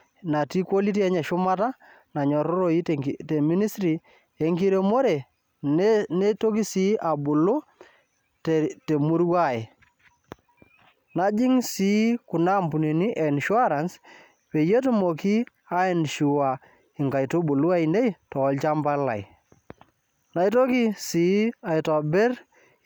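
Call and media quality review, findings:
No faults found in this speech recording.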